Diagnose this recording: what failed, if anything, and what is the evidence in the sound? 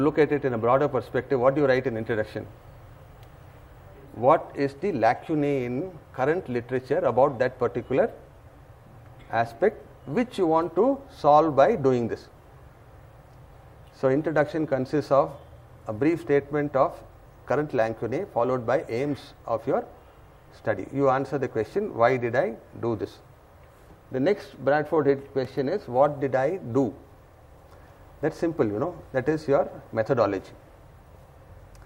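A single sharp tick at 25.45 s, where the sound drops to digital silence for about 2.7 ms and snaps back with no fade, a block of digital silence. This points to the driver or buffer stage: the output buffer went unfilled in time, and the gap fits a 128-sample buffer.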